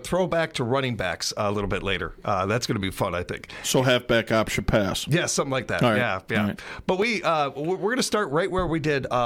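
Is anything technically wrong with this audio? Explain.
No, nothing technically wrong stands out here; the audio sounds steady and intact all the way through, with nothing that needs fixing.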